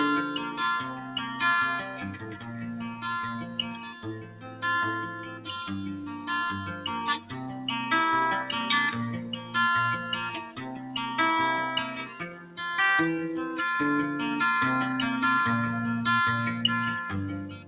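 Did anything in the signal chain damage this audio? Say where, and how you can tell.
Yes. A noise suppressor applied to music or sounds in the call-processing stage damaged this audio. It treats held tones and ambience as noise, so levels swing by about 10 dB and the sound pumps. A spectrogram shows sustained partials fading while onsets stay bright. The G.711 mu-law band limit at 4 kHz, which fits a 64 kbps call path, sounds normal.

Sound was also cut by the noise suppressor at 0.82–1.39, 1.83–4.62, 5.23–5.45, 7.19–7.68, 9.22–9.54, 10.48–10.95, 12.05–12.57 and 17.47–17.67 s, with drops of about 6 to 8 dB. On the waveform, the envelope sags after each attack and the decaying tails are cut short.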